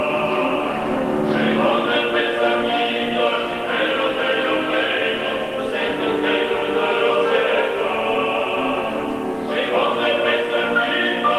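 No technical faults are audible.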